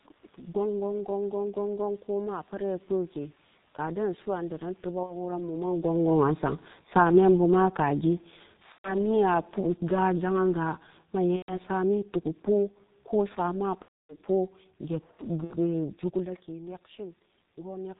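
Throughout, the speech is muffled and hoarse, with nothing above 4 kHz and smeared consonants. That is the G.723.1 codec at about 6.3 kbit/s. Its 30 ms frames and slowly updated voice model leave heavy coding damage on every syllable.

At 5.03 to 5.17 s a short buzzy smear fades where about 60 ms of audio went missing. This is VoIP packet loss concealed by the speech codec: the decoder stretched its last pitch and filter while turning the gain down, which fits roughly two lost 30 ms frames. The same stretched, fading colouration returns at 8.72 to 9.14 s and 11.36 to 11.61 s, about 120 ms lost each time, then longest at 13.82 to 14.17 s, about 270 ms, and briefly at 15.44 to 15.55 s, about 60 ms. After each gap the voice stays weak or rough for a moment as the decoder recovers.

From 5.82 to 8.09 s the level sinks by about 3 dB, then again from 8.62 to 12.77 s by about 5 dB. The room noise sinks with it, which marks this as automatic gain falling: the gain control judged the input too loud or its background noise too strong and eased its gain down gradually. 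A separate change in level near 5.5 s and another near 16 s come from the talker moving relative to the microphone.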